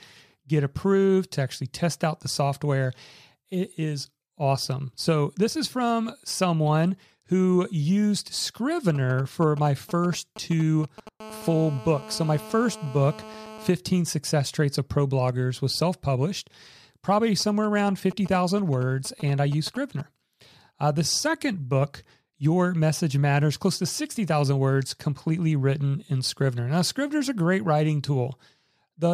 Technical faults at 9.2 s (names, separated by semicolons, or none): GSM signalling bursts